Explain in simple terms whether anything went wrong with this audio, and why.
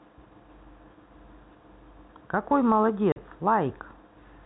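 At 3.12 s the speech briefly cuts out for 40 ms. This is packet loss filled with silence: data went missing, consistent with two 20 ms packets, and silence replaced it. The gap's abrupt edges distinguish it from smoothed-over concealment. The telephone-style G.711 sound is expected, not a fault.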